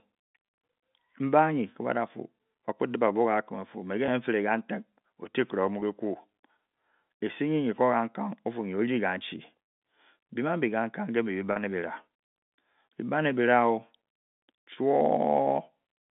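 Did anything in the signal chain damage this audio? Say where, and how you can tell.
Yes. The network stage dropped packets, and the receiver hid each gap with packet loss concealment that repeats the last pitch period. Single losses of about 20 ms at 0.46, 4.06 and 5.8 s sound like a brief, slightly held buzz, which fits 20 ms packets. A 40 ms gap at 11.52 s is longer. The worst damage is between 9.62 and 9.78 s, where the longest run of about 120 ms fades toward silence before the audio cross-fades back. The G.711 telephone band still holds through these gaps.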